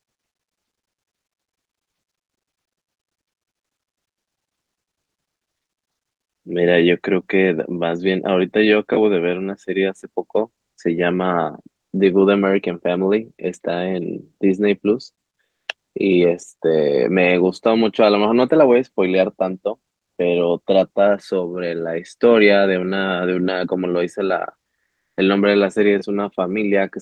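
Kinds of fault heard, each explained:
Comfort noise in place of the background, 15.49–15.67 s and 24.91–25.15 s: the faint real background in these pauses becomes a steady, featureless hiss, about 3 dB quieter then about 1 dB louder, likely because discontinuous transmission stopped sending and the receiver synthesised noise.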